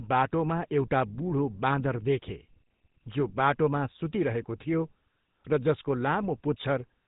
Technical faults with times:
0.00-7.08 GSM full-rate codec

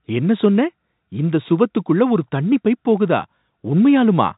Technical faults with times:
none

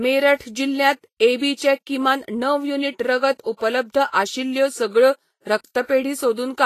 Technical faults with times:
0.00-6.66 Vorbis compression
0.35-0.40 pre-echo
4.08-4.14 pre-echo

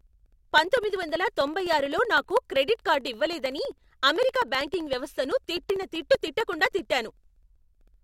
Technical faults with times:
0.07-7.94 periodic USB or driver dropouts

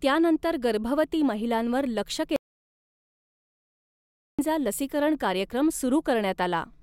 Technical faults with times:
2.36-4.39 audio dropout to silence

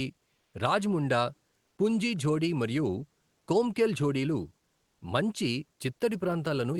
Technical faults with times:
0.39-0.53 comfort noise in place of the background
1.65-1.77 comfort noise in place of the background

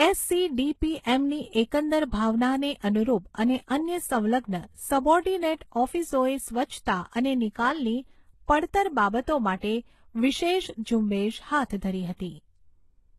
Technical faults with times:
0.00-13.19 transcoding between lossy codecs

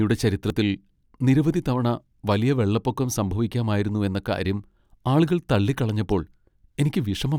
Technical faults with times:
0.50 dropped buffer (overrun)
4.71 dropped buffer (overrun)

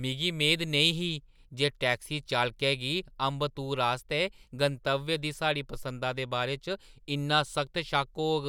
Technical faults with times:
none

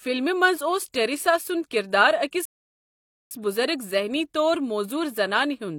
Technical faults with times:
2.45-3.31 rebuffering stall

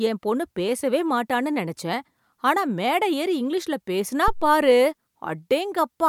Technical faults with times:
4.28-4.63 phantom power thump

